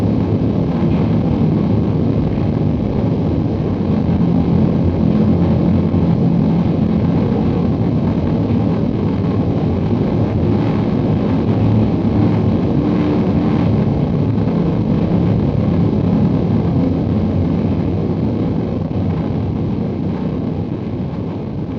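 No technical faults are audible.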